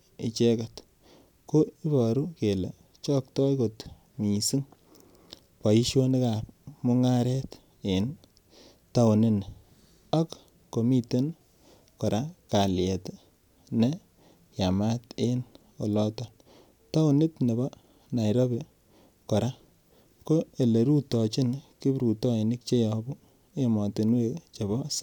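Speech recording with no audible technical faults anywhere in the clip.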